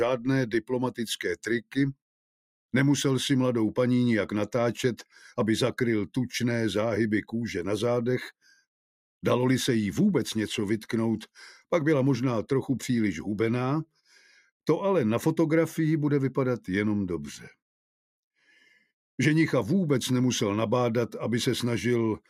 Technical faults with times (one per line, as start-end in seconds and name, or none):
0.46-0.71 sound cut by the noise suppressor
8.42-8.60 sound cut by the noise suppressor
17.37-17.56 sound cut by the noise suppressor
18.46-18.87 sound cut by the noise suppressor